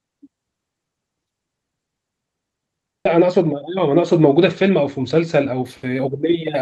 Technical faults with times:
3.05-3.07 skip ahead
3.15-6.09 jitter buffer speed-up

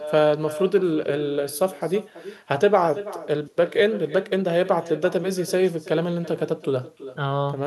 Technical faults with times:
0.00-7.67 echo with no canceller

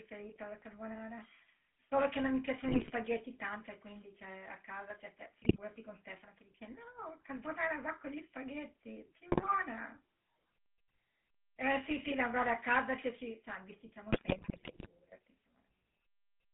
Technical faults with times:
0.00-16.54 GSM full-rate codec
2.68-2.91 GSM bit errors
5.42-5.59 GSM bit errors
9.32-9.54 GSM bit errors
11.80-12.13 GSM bit errors
14.12-14.87 GSM bit errors

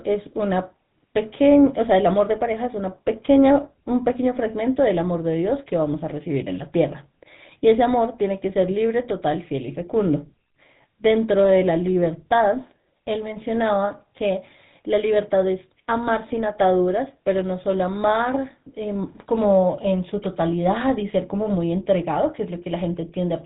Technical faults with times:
0.00-23.45 GSM full-rate codec

